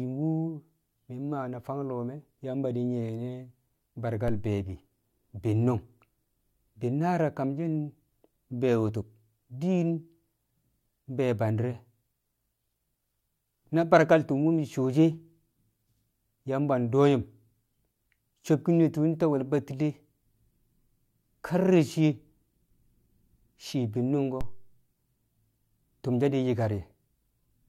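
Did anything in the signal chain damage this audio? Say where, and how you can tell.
Yes. At 4.28 s and again at 24.41 s there is a single low thump, with the speech carrying on untouched through both. These are DC steps: the waveform's zero line jumps abruptly by about -23 dBFS, then drifts back as a roughly 2 Hz high-pass drains the offset away over a fraction of a second. The sudden baseline shift produces the thump. This points to the converter or analogue input stage, where a recalibration or a switched-in offset moves the baseline.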